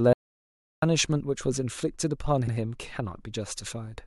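An audio dropout to silence runs from 0.13 to 0.82 s. The speech cuts to silence with no room tone for about 0.69 s, likely because the input was lost while silence kept being written. Repeated frames at 2.46 to 2.53 s replay a 69.7 ms block once, which fits a short run of compressed frames sent twice, causing a stutter and adding 69.7 ms.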